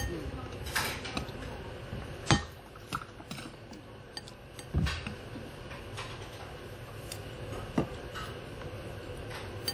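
WMA compression, audible throughout: a ringing, washy smear trails each event, with a hiss that swells and fades with the signal. This is likely a transform codec spreading quantisation noise across long blocks, consistent with a low bitrate near 48 kbps.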